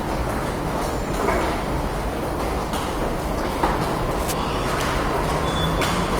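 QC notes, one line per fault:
throughout, Opus compression: the sounds turn grainy and rough as starved bands are filled with folded or noise content, which fits a likely low rate near 24 kbps.
4.11–4.34 s, cable scratch noise: a brief, dense rustling scratch about 10 dB below the sound, likely from a worn cable or connector moving and rapidly changing contact resistance.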